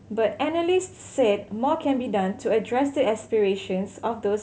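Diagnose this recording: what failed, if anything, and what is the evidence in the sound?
Nothing in the recording points to a failure at any stage of the chain. The speech comes through without any audible event that would call for a diagnosis.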